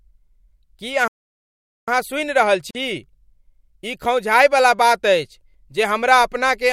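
A playback stall from 1.08 to 1.88 s cuts this speech clip off mid-flow, leaving roughly 0.8 s of dead silence before the speech carries on. The likely cause is the player running short of buffered data or its output thread being blocked, so nothing reached the output until it recovered.

A gap at a join of encoded pieces follows from 2.71 to 2.75 s, a 42 ms hole in otherwise continuous sound with edges smeared by the codec. It comes from separately encoded segments spliced without trimming, so one encoder's start-up delay and the previous segment's final-frame padding both remain as silence at the seam.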